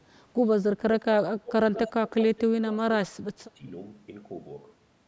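From 0.77 to 1.53 s the speech dips and breaks up, falling by roughly 25 dB at its deepest. This is speech suppressed in double talk, likely an echo canceller ducking the talker while both sides spoke at once. From 1.75 to 1.9 s a faint, delayed copy of the voice trails about 210 ms behind, sitting roughly 15 dB under the speech. This is an echo leak, likely where loudspeaker pickup slipped past the canceller and was sent back. The speech dips again from 1.88 to 2.15 s, by around 15 dB. The echo returns from 2.06 to 2.4 s, with the same 210 ms delay. Further suppression follows from 2.33 to 2.79 s, at about 20 dB. A deeper dip of roughly 25 dB comes from 3.08 to 3.63 s, chopping out about half a second of sound. Throughout, the microphone processing limits the band to nothing above 8 kHz.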